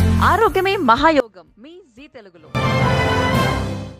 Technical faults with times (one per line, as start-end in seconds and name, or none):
1.20-2.55 one channel inverted